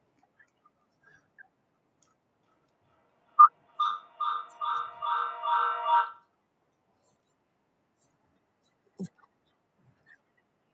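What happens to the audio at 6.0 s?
At 6.0 s the clip is near the end of a feedback echo between two devices, which runs from 2.49 to 6.26 s. A second device in the same room is playing the call back into the first one's microphone, and that microphone's echo canceller can't remove sound it didn't produce. Each stretch of speech therefore returns roughly every 0.4 s, thinner and more ringing with each pass, peaking at about 14 dB below the direct speech.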